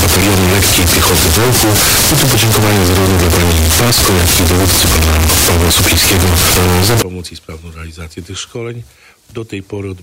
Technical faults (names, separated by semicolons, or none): float read as integer